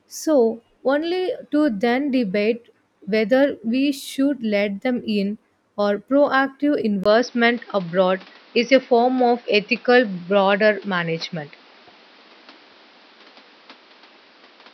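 Right after "them in or proactive", at 7.04 s, the speech turns duller and boxier and stays that way to the end, most likely because the input switched to a poorer device. A gap of about 20 ms marks the change, visible as a brief flat line in the waveform, and the level shifts by roughly 5 dB. On a spectrogram, everything above 5.9 kHz vanishes from that point, and a new background noise floor sits roughly 30 dB below the speech.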